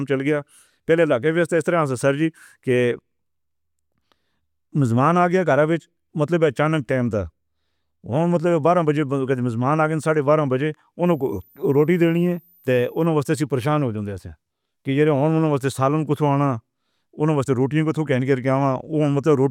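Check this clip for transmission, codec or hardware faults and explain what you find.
One hardware fault appears in this speech clip: a switching supply whistle from 11.06 to 13.06 s. A switching power supply ran in an audible burst mode or beat with another supply, and that tone leaked into the audio. It sounds like a thin, high whistle between about 13.8 and 14.1 kHz, sitting well below the speech. Its pitch wanders within that band, which sets it apart from a fixed-frequency whine or aliasing tone.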